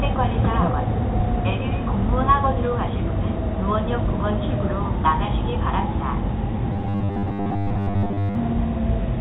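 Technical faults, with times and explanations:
6.73–8.35 s, robotic sound from repeated short buffers: a rigid metallic buzz at 100 Hz, likely from one 10 ms chunk replayed while most real audio was skipped. The spectrogram shows evenly spaced 100 Hz harmonics under the 4 kHz call-path ceiling, and the waveform shows closely repeating cycles.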